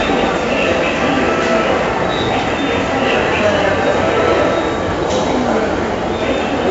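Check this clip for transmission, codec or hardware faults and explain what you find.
One codec fault runs through the whole clip. 4-bit ADPCM compression, throughout: every sample is coded as a coarse 4-bit step from a predicted value, with a step size that adapts, which fits a 64 kbps stream. The damage is heavy, a gritty hiss riding on each loud passage and roughness on sharp attacks, and nothing is heard above 7.8 kHz, which dulls the sound.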